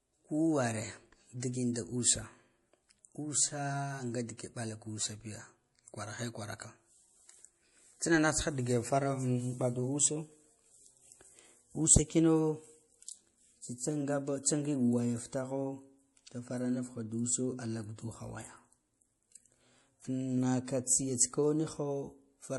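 Throughout, the speech has plainly audible codec damage and nothing above 11.5 kHz, likely MP3 compression at a low bitrate around 48 kbps, zeroing weak frequency lines. From 1.40 to 1.42 s, pre-echo: quantisation noise spreads about 27 ms ahead of a sharp attack, heard as brief hiss and a softened onset.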